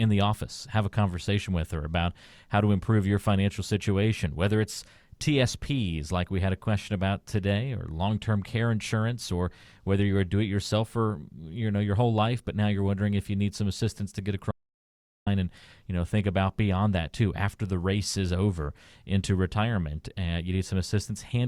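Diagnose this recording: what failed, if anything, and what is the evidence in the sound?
At 14.51 s the speech stops abruptly mid-flow and the track falls to silence, with no room tone or noise floor underneath, until the sound resumes just as suddenly at 15.27 s. About 0.76 s of speech is simply missing. This is an audio dropout to silence, most likely at the input stage, a momentary loss of the source signal through the wiring or device link, while the recorder kept writing silence.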